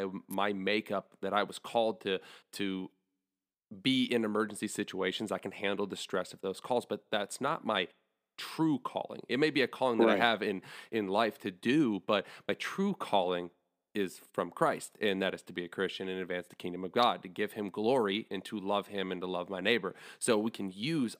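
Speech, with two electrical switching spikes. A sharp snap sits from 0.31 to 0.34 s, just before "makeup that I was". Another lands at 17.03 s, between "advance the kingdom of" and "to give him glory". Each peaks near -25 dBFS. A nearby switch arcing is the likely cause.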